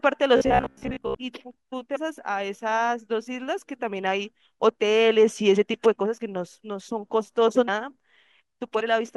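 From 0.37 to 1.19 s there is robotic sound from repeated short buffers. New audio likely arrived too slowly, so the playback kept looping the last short buffer of about 15 ms instead of waiting. For most of that stretch the real signal is replaced by these repeats, which impose a fixed buzz at 66.8 Hz. The speech becomes a stiff, metallic drone that only loosely tracks the original contours.

At 1.95 s, 7.67 s and 8.79 s, compressed frames are skipped. Blocks of 26.1 ms frames never reach the output, either because they are missing or because the decoder rejected them as corrupt. The audio jumps forward by about 300 ms at the first point, which fits around ten frames. It jumps by about 200 ms and 150 ms at the later two, which fits around seven frames each. Overlapping frames smear each join into a short blip rather than a sharp click.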